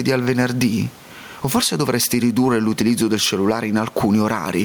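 Gain pumping runs right through the speech, with the level swinging by around 10 dB as loud moments get pulled down and then recover. That's likely the input gain set far too hot with a fast limiter or compressor clamping it. Room noise sits about 36 dB under the speech.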